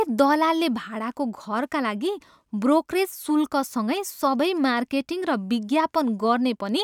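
No technical faults are audible anywhere in the speech recording.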